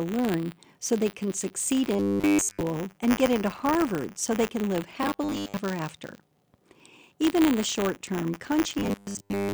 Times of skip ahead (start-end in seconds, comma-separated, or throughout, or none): none